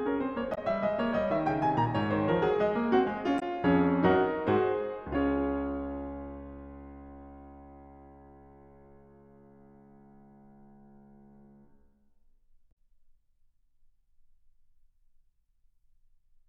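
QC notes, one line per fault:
0.51–0.58 s, 3.36–3.43 s and 12.68–12.73 s: damaged data in a compressed stream. Three brief glitches, about 70, 70 and 40 ms, cut into the music where the decoder misreads corrupted frames and hunts for the next valid header.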